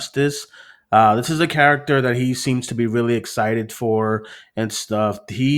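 No technical faults can be heard anywhere in this speech recording. There is nothing in the audio to point to or time.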